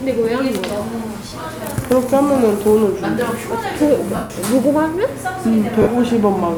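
Lost LE Audio frames hit at 1.29 s (30 ms), 4.16 s (140 ms) and 5.82 s (50 ms). The decoder repeats the last spectrum with scrambled signs, giving a noisy smear. The 140 ms gap fades away.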